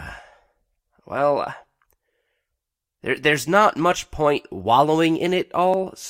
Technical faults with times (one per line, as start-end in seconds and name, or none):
3.17 corrupt frame decoded